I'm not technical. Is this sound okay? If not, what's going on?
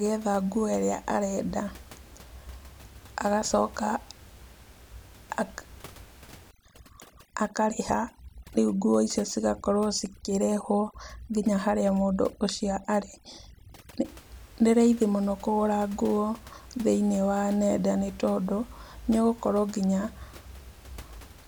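No. From 6.51 to 14.05 s, overdone noise removal strips away quiet parts of the voice with the background noise, and the background drops and breaks up into twinkling specks.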